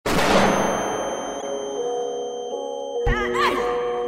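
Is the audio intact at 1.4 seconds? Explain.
No. From 1.40 to 1.43 s there is a corrupt frame decoded: flipped bits in what sounds like a single compressed frame were played anyway, so misread gains and codes place energy at wrong frequencies, heard as a short chirp, squeak, blip or burst of noise peaking near -20 dBFS.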